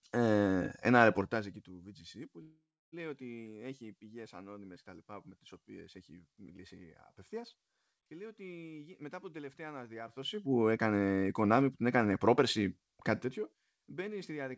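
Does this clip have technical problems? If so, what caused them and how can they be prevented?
Yes. A call audio freeze runs from 2.42 to 2.94 s. The speech stops and the last sound is stretched into a fading buzz that drops to silence for about 0.29 s. When the sound resumes, it carries on from where it stopped, so nothing is lost but the whole stream now runs about 0.5 s later. The likely cause is that packets were held up in transit and the jitter buffer ran empty, leaving the receiver nothing to play. Preventing it means improving the network path or allowing a deeper jitter buffer so brief stalls are absorbed.

Jitter buffer speed-up happens twice: from 8.77 to 9.42 s, at about 111% speed with roughly 70 ms trimmed, and from 13.93 to 14.50 s, at about 108% with roughly 50 ms trimmed. The buffer held more audio than it wanted. To shrink it, the receiver repeatedly cut out short pitch-period slices. 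The speech sounds hurried while its pitch stays the same. Steadier packet delivery avoids the backlog, and a gentler catch-up rate makes the speed-up less noticeable.

The G.722 call codec at 64 kbps passes nothing above 8 kHz.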